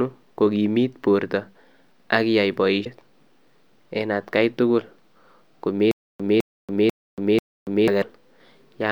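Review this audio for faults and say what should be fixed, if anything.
The speech carries two short bursts of damaged data in a compressed stream, at 2.81 to 2.87 s and at 7.98 to 8.04 s, each about 55 ms long. Corrupted bytes made the decoder misread those frames and lose sync before locking onto the next valid frame header. To prevent it, protect the stream with checksums or error correction and verify file integrity after transfer.

From 5.91 to 7.88 s there is a stutter with silent gaps. A 209 ms fragment plays four times, each followed by about 282 ms of digital silence, giving an even 491 ms cycle. The pattern points to a stalled player or starved stream, likely one that replayed its last buffered fragment at each retry and then ran empty. The audio that belonged in that span is lost. To prevent it, enlarge the playback buffer and handle network or disk underruns so playback pauses cleanly instead of looping stale data.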